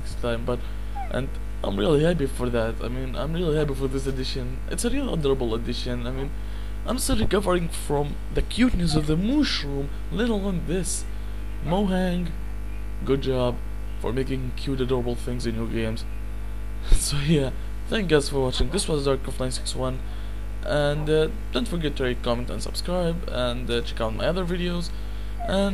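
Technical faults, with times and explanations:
No technical faults are audible anywhere in the clip.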